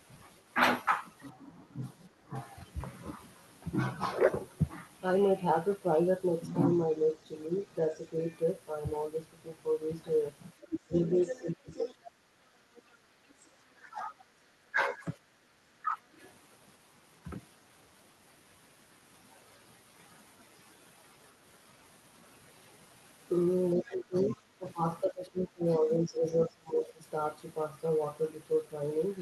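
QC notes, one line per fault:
1.32–2.34 s, 10.86–16.04 s and 23.75–27.06 s: speech suppressed in double talk. The talker's level dips in pieces, shallowly (about 5 dB) at first, then by up to about 20 dB for a few seconds. This is likely the echo canceller ducking both voices while both sides speak.
8.23–16.33 s and 23.89–23.95 s: other side's voice leaking through. A second voice sits under the talker, roughly 10 dB down in the long stretch and only a faint scrap later. This likely comes from loudspeaker echo that the canceller did not fully remove.
13.06–15.51 s: background gated by the echo canceller. The room sound briefly dips by up to about 7 dB, for a fraction of a second in total. The canceller clamps the microphone while the loudspeaker plays, then releases it.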